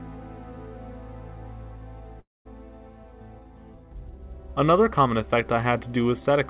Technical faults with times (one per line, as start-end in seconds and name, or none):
2.20-2.47 long network dropout